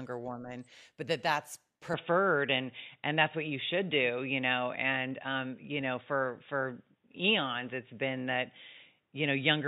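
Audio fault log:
1.94–9.68 s, input switched to a poorer device: the speech turns dull and boxy with no gap, likely from a change to a narrower-band microphone or headset. The spectrogram cuts off sharply above 3.8 kHz and gains a faint noise floor, and the waveform level shifts by roughly 5 dB.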